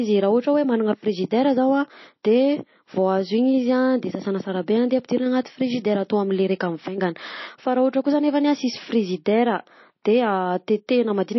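MP3 compression runs throughout this speech clip: nothing survives above 5.8 kHz, and the damage is plainly audible, which points to a very low bitrate of roughly 26 kbps. Short of bits, the encoder likely cut the treble and dropped weak frequency lines frame by frame.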